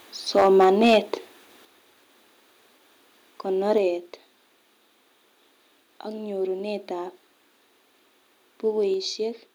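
From 0.36 to 0.98 s the loudest syllables take on a harsh, crackling edge, likely microphone overload: input peaks about 6 dB too hot had their tops flattened at the converter's limit, affecting around one sample in twenty. Unlike a gain change, clipping only distorts the peaks.

Inside that stretch, at 0.64 s, and again at 1.65 and 3.78 s, the speech and background drop together by about 2, 6 and 4 dB, likely the microphone volume stepped down by the call software. Each drop is a sudden step.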